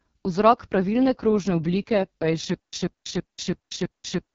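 From the start, the speech carries the sound of the AMR wideband (HD Voice) codec. The damage is heavy. The speech sounds rough and raspy. That texture fits AMR-WB at its lowest rate, around 6.6 kbit/s. The codec builds speech from a pulse-driven model of the vocal tract up to 6.4 kHz. Above that it adds shaped noise. Nothing is heard above 7.5 kHz.

At 2.54 s a stutter with silent gaps begins and runs to the end. A burst of about 0.14 s plays, then drops into digital silence for about 0.19 s. The same burst then returns. The cycle repeats every 0.33 s, five times in all. The regular pace points to a likely cause: a stalled player or stream that replays its last fragment on each retry, then runs empty. The audio that should have filled this stretch never arrives.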